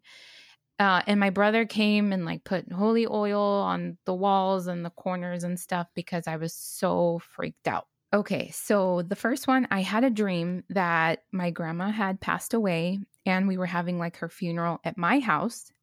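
At 8.86 s and again at 10.50 s the speech has a single sharp click, a thin vertical line in the spectrum. Both are likely dropped samples, just a handful each, so the waveform jumps ahead too briefly to lose any sound.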